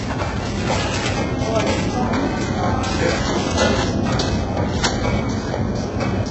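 A recording of sounds, carrying heavy HE-AAC compression damage throughout, likely from encoding at a very low bitrate around 8 kbps. Nothing remains above 8 kHz, and the upper band is rebuilt from copied lower bands, so the treble sounds synthetic, gritty and misaligned with the lows.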